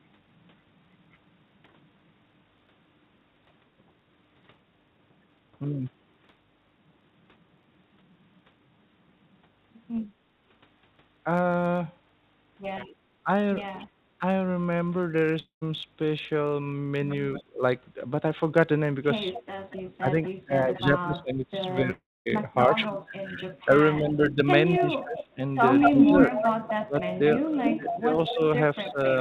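Throughout, a block size mismatch (truncated) sets up a steady buzz at 91.9 Hz: one stage writes longer blocks than the next reads and each block's tail is discarded. The size difference is too small to shift the speed, which stays at 1.0 times normal.

At 3.78 to 3.91 s the background is gated by the echo canceller: while the loudspeaker plays, the canceller pulls the microphone down by about 6 dB. For roughly 70 ms the room sound dips, then returns.

At 13.24 to 13.29 s the speech dips by around 15 dB for about 50 ms, likely speech suppressed in double talk: the canceller, unable to tell the local talker from loudspeaker echo, turns everything down. The same happens more deeply at 17.41 to 17.63 s, around 25 dB for about 200 ms, and again from 19.78 s to the end, by around 20 dB.

An echo leak appears at 13.78 to 13.87 s, 17.34 to 17.44 s and 19.33 to 20.79 s. A copy delayed by 229 to 233 ms rises from far below the speech to moderately below it, likely residual loudspeaker pickup the far canceller missed. 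From 22.54 s to the end, the 237 ms echo runs louder than the speech itself.

At 15.40 to 15.63 s and 21.91 to 22.28 s, a fading buzz fills 218 and 350 ms, then gives way to 120 and 240 ms of silence. The audio then resumes with 220 and 360 ms missing, likely a long network dropout that the receiver concealed.

Over the G.711 A-law call path, nothing is heard above 4 kHz.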